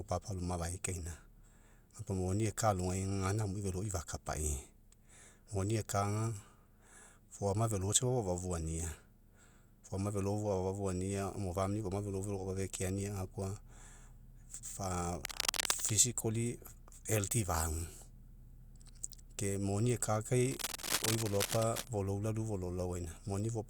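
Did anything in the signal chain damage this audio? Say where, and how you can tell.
Yes. Cable scratch noise appears at 15.21–15.91 s and 20.51–21.88 s as dense, uneven rustling over the speech, first about as loud as it, then somewhat quieter. This points to analogue wiring, likely a worn connector whose contact resistance fluctuated as it moved.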